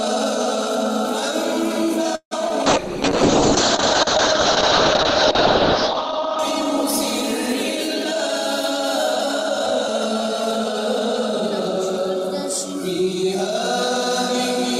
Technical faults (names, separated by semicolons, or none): call audio freeze; short concealed packet loss; call bitrate drop